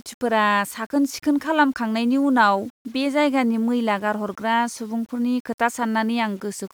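No technical faults can be heard anywhere in the speech. The 8-bit storage is read correctly and leaves only a grainy floor beneath the quietest moments.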